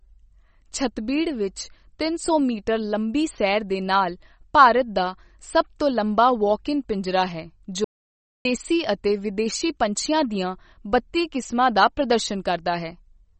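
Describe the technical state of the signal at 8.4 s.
At 8.4 s the signal is in an audio dropout to silence lasting from 7.84 s to 8.45 s, about 0.61 s in all. The sound cuts off straight after "ਇਨ ਪਿੰਜਰਾ ਹੈ" and returns at "ਦੇਸੀ ਅਤੇ ਵਿਦੇਸ਼ੀ ਪੰਛੀਆਂ". Whatever was spoken in between is gone. The gap is silent with no room tone, likely because the input was lost while the recorder kept writing silence. The waveform shows a flat line and the spectrogram a fully blank column, both with hard edges.

The speech on either side of the gap shows MP3 compression. Nothing is present above 8.3 kHz, and the codec damage is plainly audible, which fits a low bitrate around 32 kbps. Starved of bits, the encoder drops the treble at a fixed cutoff and lets weak frequency lines flicker on and off between frames. This gives the speech a watery, swirling quality, with metallic chirps on s sounds and smeared consonant onsets. 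On a spectrogram this appears as a sharp horizontal ceiling at 8.3 kHz, with patchy, speckled energy just below it.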